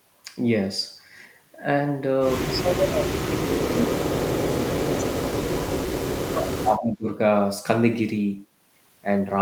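From 2.46 to 5.85 s the speech dips hard and breaks up, falling by roughly 40 dB at its deepest, then again from 6.29 to 7.07 s by about 30 dB. This is speech suppressed in double talk, likely an echo canceller muting the near talker while the far side spoke.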